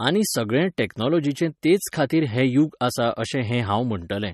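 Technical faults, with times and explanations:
Throughout, MP3 compression: the speech sounds plainly watery and swirly, with nothing above 13 kHz, likely from MP3 encoding at around 36 kbps. Short of bits, the encoder drops weak frequency lines frame by frame, so a spectrogram shows a flat ceiling at 13 kHz with flickering holes beneath it.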